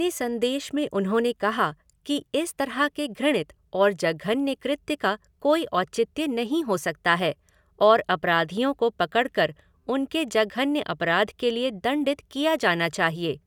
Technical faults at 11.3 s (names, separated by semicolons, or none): none